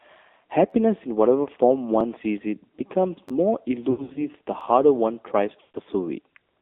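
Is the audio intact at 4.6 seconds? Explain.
No. At 4.61 s a repeated buffer occurs: a roughly 10.7 ms block, which fits a 512-sample buffer, plays one extra time with a hard join, heard as a brief click-like buzz. Nothing is lost. The AMR narrowband mobile codec also runs through this moment. At 7.4 kbps, its pulse-driven vocal-tract model leaves the voice plainly buzzy and synthetic, confined to 250 Hz to 3.6 kHz.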